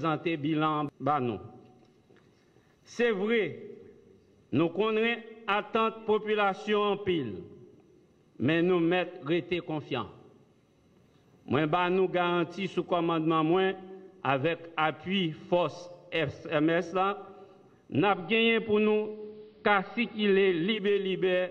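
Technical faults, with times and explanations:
17.94 to 20.83 s, digital radio blending to analogue: the receiver lost its digital stream and cross-faded over about 119 ms to the station's AM broadcast, then returned. During that stretch the level shifts by about 2 dB, and a faint hiss sits roughly 45 dB down. A plain low-pass filter would not add hiss or a level step, and a dropout would leave a gap, so those smooth cross-fades mark a blend.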